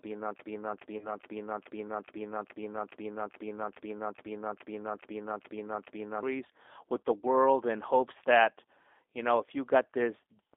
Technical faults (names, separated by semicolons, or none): G.729 codec; VoIP packet loss concealed by the speech codec